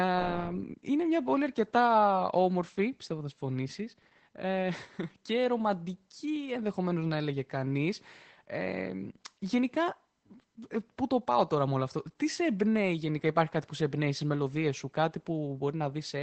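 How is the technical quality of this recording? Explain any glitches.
The recording is noticeably degraded by codec damage throughout the clip. Opus voice compression muffles the speech and removes everything above about 8.7 kHz, and its coarse linear-prediction coding adds a hoarse, slightly robotic texture. That texture sets it apart from a plain low-pass filter, and the sound points to a low bitrate around 12 kbps.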